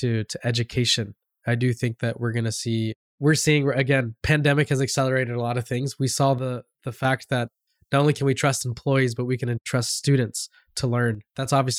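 The speech abruptly drops by about 6 dB from 6.39 to 7.05 s and again from 11.15 to 11.45 s, then returns to full level. This is likely one channel drops out: one stereo side vanishes, halving the mono-summed level.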